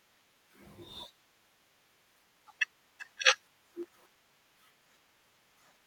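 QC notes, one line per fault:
3.83–4.51 s, processor overload crackle: the speech tears into gritty crackle as about twenty tiny dropouts to silence, each fitting a buffer under a millisecond long, follow one another while processing falls behind; the waveform shows hard-edged gaps, the spectrogram dense vertical broadband streaks.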